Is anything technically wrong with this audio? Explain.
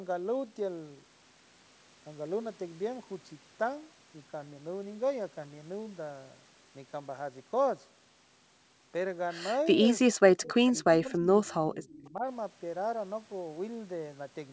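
Yes. In the second half of this speech clip, the call's echo handling breaks down in two ways.

From 9.65 to 9.85 s, 10.13 to 10.48 s and 10.84 to 12.25 s, the sound shows what is likely speech suppressed in double talk. With both sides talking, the echo canceller turned the near talker down along with the echo. The level dips by about 10 dB, then by about 40 dB, almost cutting out, then by about 20 dB over roughly a second.

Around 10.68 to 10.72 s and 11.47 to 11.52 s, brief scraps of a delayed copy of the voice appear, likely an echo leak. A loudspeaker echo slipped past the canceller and came back about 0.31 s late. It sits about 25 to 30 dB below the speech.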